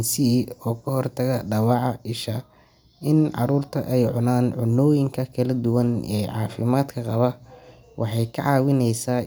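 Nothing in the speech stood out as a technical fault on listening.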